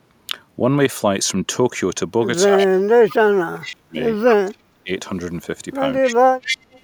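Speech recording with two echo-canceller faults. Speech suppressed in double talk pulls the talker down by up to about 35 dB at 2.47 to 4.0 s, 4.41 to 4.9 s and 6.01 to 6.3 s. The likely cause is an echo canceller that could not tell near speech from loudspeaker echo and attenuated both. Echo leak brings in a delayed copy, 252 ms late, at 2.58, 3.11, 3.64, 4.22 and 6.02 s, the last running to 6.8 s. It starts roughly 25 dB under the speech and grows to about 10 dB under, likely residual loudspeaker pickup the canceller failed to remove.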